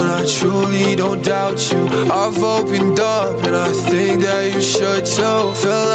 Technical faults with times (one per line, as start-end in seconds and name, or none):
0.00-5.94 gain pumping